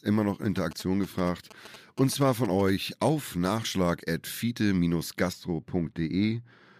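Speech clip with two faults. From 0.56 to 2.70 s, just before "auf nachschlag at", GSM signalling bursts from a nearby 2G phone produce a galloping pattern of short 217 Hz buzzes, roughly 20 dB below the speech. On a spectrogram they appear as clustered vertical stripes with harmonics stacked at 217 Hz spacing, and the waveform shows spiky bursts. From 5.33 s to the end, de-emphasis applied wrongly rolls the treble off smoothly, about 14 dB down at 10 kHz relative to 1 kHz. The speech turns dull and muffled, and the spectrogram's upper bands fade steadily rather than ending at a sharp edge.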